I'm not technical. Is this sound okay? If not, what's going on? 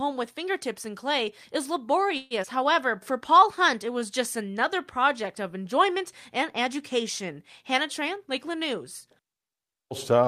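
No, there are a few moments where the sound is disturbed, all typical of audio sent live over a network.

From 2.17 to 2.34 s the sound briefly stalls: for about 130 ms you hear the last bit stretched out as a fading buzz or hiss, then it carries on exactly where it stopped, with nothing lost. This is a call audio freeze, likely caused by pieces of the audio getting held up in transit, so the receiving end ran out of sound to play and filled the wait with an echo of what it had.

Right after, between 2.43 and 2.47 s, the sound jumps forward with almost no gap, like a tiny hiccup where a fraction of a second is cut out, roughly 70 ms. This is a skip ahead. The receiver had fallen a little behind and, with later audio already waiting, dropped a short stretch and joined the two sides almost directly to catch up.

From 2.66 to 4.00 s the sound plays slightly slower, at about 96% of normal speed, without dropping in pitch. 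Sounds feel a touch drawn out, with perhaps a faint wobble. This is a jitter buffer slow-down. The receiver's small reserve of incoming audio was running low, so it repeated tiny slices many times over, adding about 53 ms in total to rebuild that cushion.

From 7.99 to 9.34 s the opposite happens: the sound runs a bit fast, around 108% of normal speed, still at the same pitch, and can feel slightly rushed. This is a jitter buffer speed-up. Too much audio had piled up waiting to be played, so the receiver trimmed many very short slices, roughly a tenth of a second altogether, to bring the delay back down.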